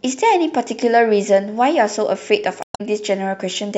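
Speech clip with damaged data in a compressed stream from 2.60 to 2.81 s: corrupted bytes threw the decoder out of sync, producing a brief chirp or blip while it searched for the next frame.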